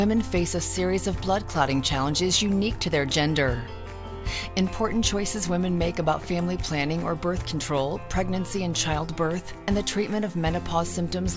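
No technical faults can be heard in this audio.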